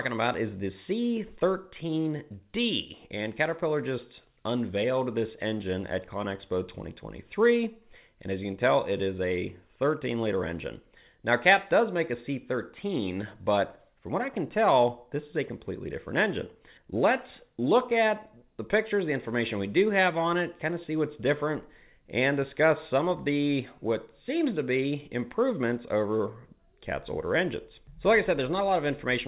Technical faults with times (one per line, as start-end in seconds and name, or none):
none